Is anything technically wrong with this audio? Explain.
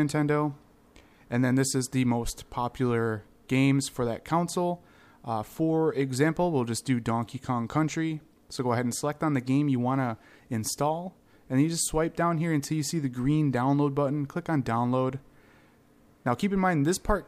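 No, nothing stood out as technically wrong on listening to this audio.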